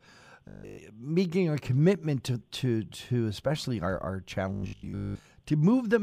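From 0.48 to 0.78 s, and again from 4.53 to 5.25 s, the speech becomes a rigid metallic buzz pitched at 50 Hz, completely in the first stretch and for most of the second. This robotic sound from repeated short buffers is likely caused by a 20 ms slice being looped while incoming audio is skipped.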